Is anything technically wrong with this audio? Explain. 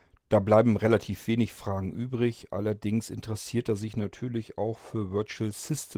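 No, nothing technically wrong here.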